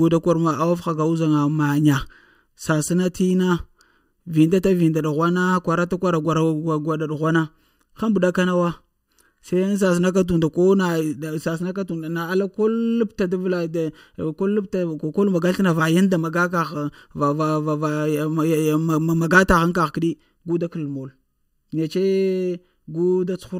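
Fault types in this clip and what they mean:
Channel delay (comb filtering): one channel runs under a millisecond behind the other, so the mono sum cancels at evenly spaced frequencies from around 700 Hz upward. The speech sounds hollow and phasey for the whole clip; unlike a tone control or reverb, the notches stay fixed and regularly spaced.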